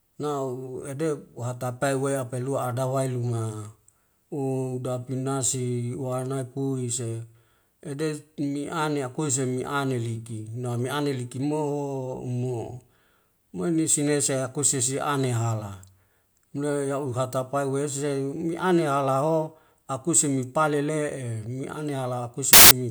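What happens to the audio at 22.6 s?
A burst of file tags played as audio, from 22.53 to 22.71 s. Embedded cover-picture data is read as samples. It sounds like very loud white noise with hard edges.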